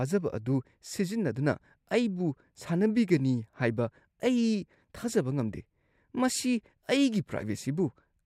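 Listening through this speech recording, nothing technical stood out.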